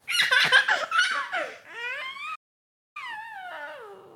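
A short clip of sounds with a playback stall: at 2.35 s it cuts to silence for about 600 ms, picking up again at 2.97 s, likely because the player starved for data or its thread got blocked.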